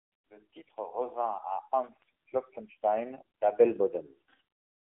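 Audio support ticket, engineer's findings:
AMR narrowband mobile codec throughout. Speech held to 200 Hz–3.5 kHz, nothing above 3.6 kHz. Buzzy, synthetic vowels from a bit-starved, pulse-driven vocal-tract model, fitting 7.95 kbps. That coding texture, not band-limiting alone, rules out a telephone filter.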